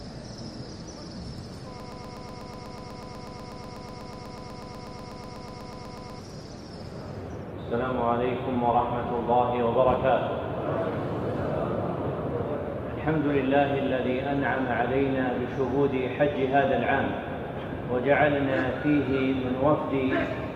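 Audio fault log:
1.80–6.19 s, broken-record loop: a 123 ms fragment repeats exactly, back to back, 36 times, giving a rapid stutter for over four seconds. The likely cause is a stalled player, encoder or stream resending its last fragment, so the audio meant for that stretch is lost.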